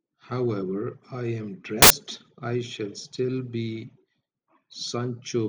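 At 1.82 s the speech cuts to a burst of harsh, loud broadband noise that lasts until about 1.90 s, so roughly 80 ms. That's samples built from the wrong bytes: for that stretch the reader assembled each sample with its bytes misaligned or swapped, so the jittery low-order bits landed in the high-order position and swamped the real waveform.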